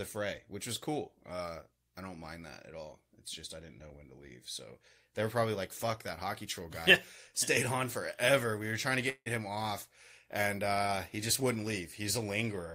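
From 9.09 to 9.28 s, a call audio freeze holds the last sound as a fading tone, then silence. This is likely a jitter-buffer underrun: speech resumes intact, not clipped like a dropout.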